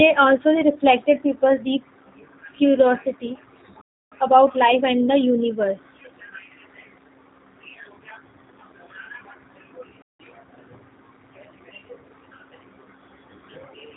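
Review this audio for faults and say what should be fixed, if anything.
Throughout, the speech sounds narrow, slightly rough and synthetic, with nothing above about 4 kHz. That is the G.729 codec at 8 kbit/s. It discards the waveform and resynthesises each 10 ms frame from a vocal tract filter, a pitch predictor and a few pulses, so fine detail is replaced by a plainly audible, buzzy approximation. To prevent it, carry the call on a wideband codec such as G.722 or Opus.

The speech cuts to silence twice in mid-flow, from 3.81 to 4.12 s (about 0.3 s) and from 10.02 to 10.20 s (about 0.17 s), then carries on. These are playback stalls, likely caused by the player running short of buffered data or by its audio thread being blocked, so nothing reached the output until it caught up. To prevent them, give the playback buffer more headroom and run the audio thread at higher priority.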